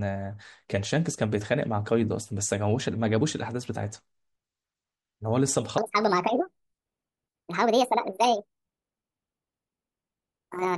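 From 5.78 s to the end at 10.78 s, the speech plays back as a section at the wrong speed, running 1.6 times too fast, most likely from being read against the wrong clock. Pitch and pace jump together, so the voice turns hurried and chipmunk-like, up about seven semitones. On a spectrogram the harmonics and formants shift upward and spread apart at 5.78 s, while the waveform's syllable envelopes compress noticeably in time.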